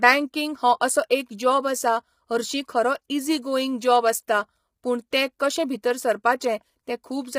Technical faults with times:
0.00-7.38 low-delay AAC compression
1.09 pre-echo
5.11 pre-echo

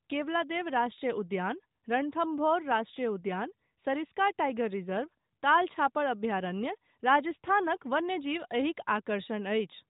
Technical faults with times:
none

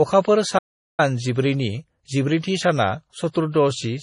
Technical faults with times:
0.00-4.02 low-bitrate audio saved at a high bitrate
0.58-1.00 playback stall

